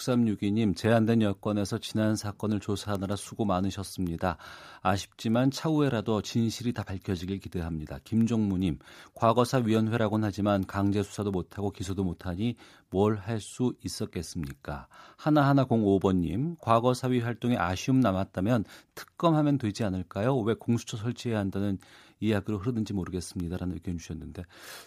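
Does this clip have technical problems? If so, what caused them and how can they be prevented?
Yes. A single flipped bit in memory or on the digital link corrupted one sample at 2.95 s (about -16 dBFS) and at 5.34 s (about -28 dBFS), producing two isolated, broadband bit error spike ticks. Error-checked links and ECC memory along the capture and transfer path would prevent this.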